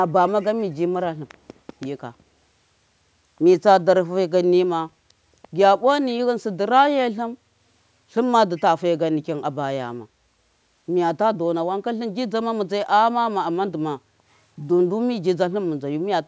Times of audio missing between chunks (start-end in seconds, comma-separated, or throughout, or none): none